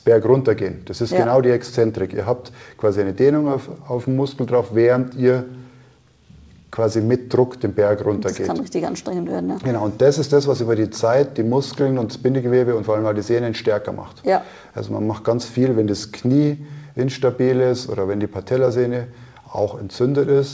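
No technical faults can be heard; the sound has passed through a call path whose codec leaves nothing above 8 kHz, which fits wideband G.722 at 64 kbps, and its jitter buffer introduces no audible disturbance.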